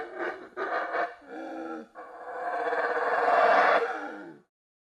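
Nothing in the audio stood out as a fault on listening.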